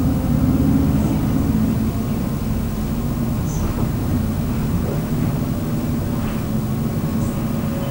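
From start to end, video or display buzz sits under the sound: a 50 Hz field-rate buzz with hash above it, about 15 dB below the signal, plus a thin 15.6 kHz line-rate whine. That whine separates it from plain mains hum at the same frequency.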